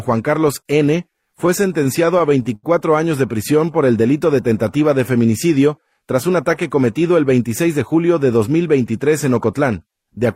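Repeated stalls (stutter) from 1.13 to 2.65 s: packets arrived late, the jitter buffer emptied twelve times, and the receiver stretched the last sound, longest gap 77 ms, so the audio drags.

Jitter buffer slow-down from 3.32 to 3.78 s: repeated pitch periods add 39 ms to rebuild the buffer, so the audio runs at 93% speed and the pitch stays the same.

Jitter buffer speed-up from 5.79 to 6.35 s: roughly 50 ms of pitch periods are cut to shrink an overfull buffer, so the audio runs at 108% speed and sounds hurried.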